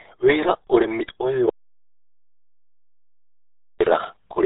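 From the start, the speech carries heavy RealAudio 14.4 codec damage: nothing above 3.8 kHz survives, and the voice turns muffled and gargly, which points to a dial-up-era rate near 8 kbit/s. Plain low-pass filtering would dull the sound without this bubbling, smeared texture.

At 1.49 s the audio drops out to silence until 3.80 s, losing 2.31 s. The gap is silent with no room tone, unlike a noise gate or fade, most likely because the input was lost while recording continued.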